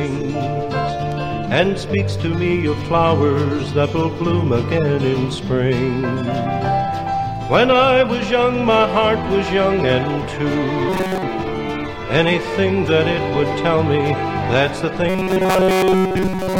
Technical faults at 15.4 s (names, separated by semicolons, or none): robotic sound from repeated short buffers